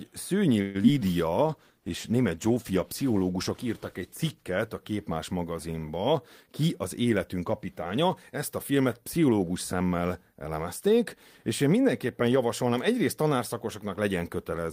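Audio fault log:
0.61–0.77 s, call audio freeze: the last sound stretches into a fading buzz for 132 ms, then resumes with nothing lost, likely from packets delayed and an empty jitter buffer.
0.83–0.86 s and 1.00–1.03 s, short concealed packet loss: brief smears where 20 ms and then 40 ms of audio never arrived and the gaps were patched by extrapolation.
1.29–1.73 s, jitter buffer slow-down: speech drags at 93% speed with unchanged pitch, as repeated pitch periods add 38 ms to rebuild the buffer.
1.49–5.21 s, call bitrate drop: speech turns rough and muffled as the encoder falls from 32 to 15 kbps, staying at the lowest rate for about 2.9 s.
6.48–7.97 s, jitter buffer speed-up: speech sounds hurried at 108% speed, same pitch, with roughly 150 ms of pitch periods cut to reduce delay, ending just before "ezt a filmet pszichológus".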